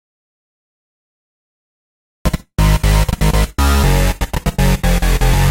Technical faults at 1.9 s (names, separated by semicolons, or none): audio dropout to silence